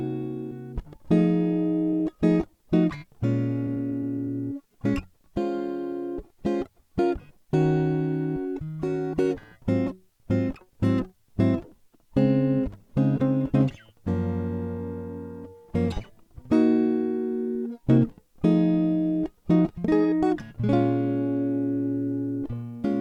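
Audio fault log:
1.92–3.18 s: jitter buffer speed-up. The music briefly runs about 4% fast at unchanged pitch, so the tempo pushes ahead. The receiver was holding excess buffered audio and trimmed short pitch-period slices repeatedly, discarding roughly 50 ms in total to reduce delay.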